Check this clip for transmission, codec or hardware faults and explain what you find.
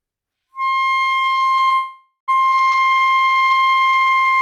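One transmission fault is present: a call audio freeze from 1.75 s to 2.30 s. The sound stops advancing, the last fragment is stretched into a decaying buzz for roughly half a second, then about 100 ms of silence follows before playback resumes where it left off. Nothing is lost, but everything after 2.30 s runs about 0.52 s late. This is likely a jitter buffer that ran empty while packets were delayed in transit, with the receiver concealing the wait.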